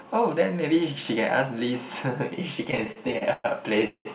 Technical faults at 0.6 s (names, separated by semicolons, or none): none